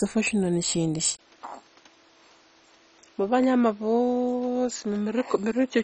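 Speech recording that was likely encoded with MP2 compression at a very low rate, the heavy damage fitting something near 32 kbps. Nothing remains above 9.6 kHz, so the whole clip sounds dull, with the gurgling, granular quality of upper sub-bands flickering off and coarse quantisation in the bands that are left. At 1.17 s the input likely switched to a poorer device. A 20 ms gap marks the change, and from there to the end the band narrows further to 7.6 kHz. The sound becomes boxier and a few decibels quieter, with a new noise floor sitting roughly 30 dB under the speech.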